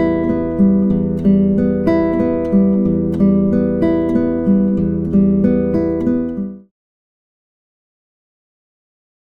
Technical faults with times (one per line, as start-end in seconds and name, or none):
none